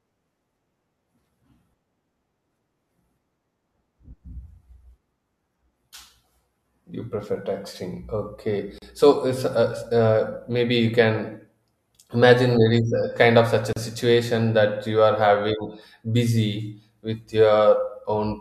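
At 8.78 to 8.82 s the speech drops out for about 36 ms, with its edges smeared, then resumes where it stopped. The same break returns at 13.73 to 13.76 s, between "kind of such a" and "a situation that you". Each is a gap at a join of encoded pieces: separately encoded segments were joined untrimmed, so one segment's padded last frame and the next one's leading encoder delay stay in as silence.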